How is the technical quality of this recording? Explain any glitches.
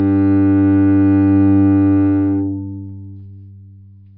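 Nothing in the recording is a technical fault: no glitches, no dropouts, no level or timing problems.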